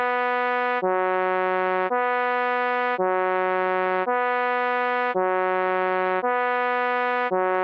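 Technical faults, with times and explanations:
No technical faults can be heard in these sounds. The call microphone processing and the Opus call path leave nothing above 8 kHz, so the top end stops there.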